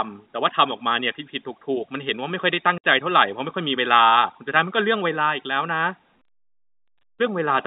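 At 2.78 s the speech drops out for about 60 ms. This is packet loss filled with silence. Lost audio was replaced by nothing, leaving a hard-edged hole. The gap fits three 20 ms packets. The narrow telephone band of G.711 A-law coding stays audible throughout.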